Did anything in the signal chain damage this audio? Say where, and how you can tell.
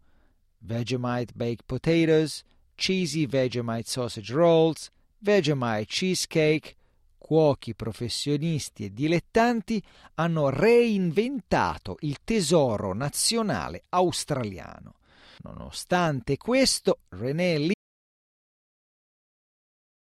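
Yes. At 17.74 s the speech cuts off mid-flow and the audio drops to silence through the end of the clip, with no room tone at all. This is an audio dropout to silence, likely from the input device or link disconnecting while the recorder kept writing silence.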